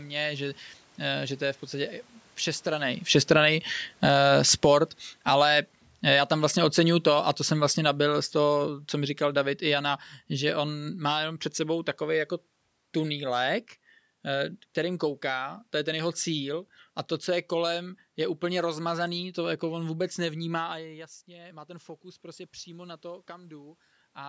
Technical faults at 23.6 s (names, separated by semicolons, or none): automatic gain rising